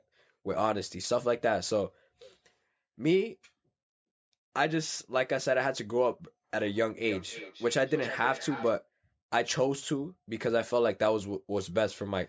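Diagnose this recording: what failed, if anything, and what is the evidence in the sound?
Feedback echo between two devices, call stage, 7.04 to 8.74 s. Speech repeats roughly every 0.3 s, about 12 dB down. A second device replays it, which the echo canceller ignores.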